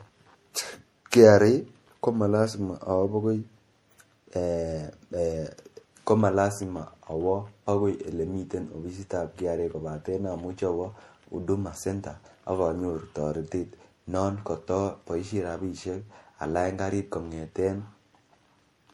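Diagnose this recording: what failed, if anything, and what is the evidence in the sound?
The codec stage failed: the speech has a swirly, hollow texture throughout, with smeared consonant attacks and a grainy noise floor that tracks the signal. That is more damage than a single lossy pass would leave, and it points to generation loss, likely from MP3 being decoded and re-encoded about three times at a rate that fits 64 kbit/s. Each pass requantises on a shifted frame grid, so the noise and spectral holes accumulate.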